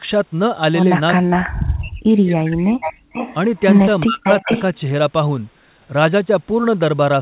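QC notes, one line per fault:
1.14–1.35 s, 1.65–2.93 s, 4.05–4.26 s, 4.42–4.49 s: speech suppressed in double talk. The speech dips by up to about 40 dB, likely because the echo canceller ducked both talkers together.
1.43–1.49 s, 2.81–3.34 s, 3.56–3.81 s, 4.24–4.77 s: echo leak. A delayed copy returns 364 ms late, then 446 ms late, roughly 5 to 20 dB below the speech.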